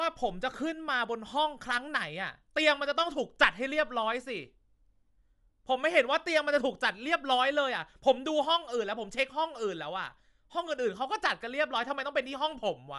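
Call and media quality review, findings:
Bluetooth LC3 compression, throughout: nothing above 11.6 kHz, plainly audible grainy, noise-filled upper band. Likely LC3 transform coding, consistent with 48 kbps, 10 ms frames.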